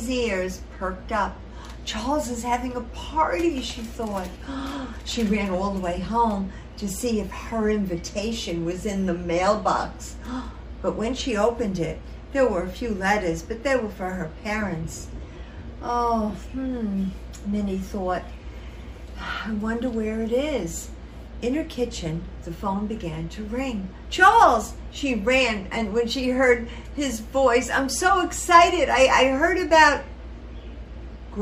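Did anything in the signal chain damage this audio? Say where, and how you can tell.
No, nothing along the chain seems to have touched this one; I couldn't find any point in the recording where something had gone wrong.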